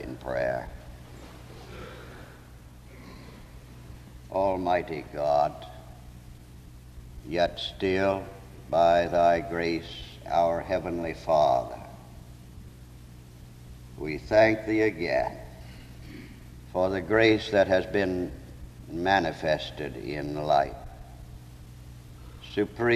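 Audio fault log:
0.66, 2.64, 3.63, 5.60 and 7.57 s: overlap between stream segments. Segment timestamps overlap, so the player trims roughly 5 to 18 ms of real audio at one-second boundaries, and each jump is heard as a tiny skip.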